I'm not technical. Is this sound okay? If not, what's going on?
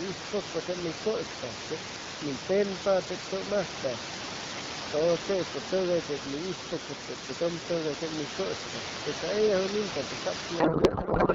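No. From 10.59 s to the end at 11.34 s, the speech turns into garbled noise and warbling that barely tracks it. This is a codec payload misread: the two ends packed the sound's data differently, so the receiving end unpacked it wrongly.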